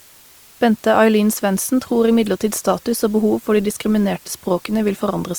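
A steady, even hiss sits under the speech for the whole clip, roughly 30 dB below it and without distortion: low bit depth with dither, which fits 8 bits. From 1.74 s to the end the speech quality drops suddenly, with more codec artefacts and no gap, an adaptive stream switching to a lower bitrate, consistent with Opus dropping from 64 to 24 kbit/s.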